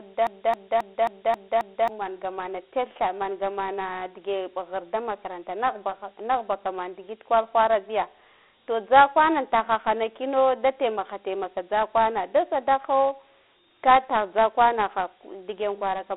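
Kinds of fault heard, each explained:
Dialogic VOX ADPCM: Coarse 4-bit ADPCM gives a gritty hiss under the speech. The band runs 300 Hz to 3.5 kHz, with nothing above 3.9 kHz.
Broken-record loop: A 268 ms fragment repeats six times from the start, already under way, until 1.89 s, just before "manga mana tetha mangamana". The likely cause is a stalled player or stream.
Loud pop: One sharp pop lands at 14.38 to 14.40 s, roughly 10 dB above the speech, which continues underneath. A likely cause is a voltage step or driver glitch.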